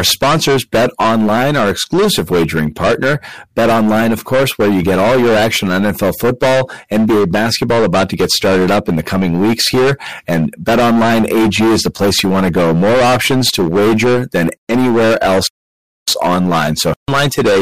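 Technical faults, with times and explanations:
Throughout, hard clipping: the speech is driven about 19 dB past what the signal path can pass, so roughly a third of all samples are sliced flat at the ceiling. Those squared-off peaks generate high harmonics, turning every loud syllable into a harsh, buzzing fuzz.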